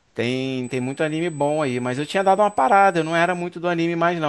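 Current drawn by the USB bus in 125-microsecond microframes leaks into the audio path through a shared power or ground connection, producing USB whine from 0.64 s to 3.42 s. The 8000-per-second microframe rhythm becomes a steady tone of fixed pitch at 8 kHz, its strongest component, sitting roughly 30 dB below the speech. It is heard as a thin, high whistle running under the speech for nearly three seconds before stopping.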